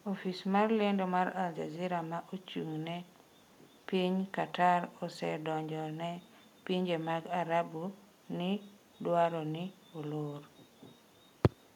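Listening to this speech recording, nothing stood out as a technical problem at any point.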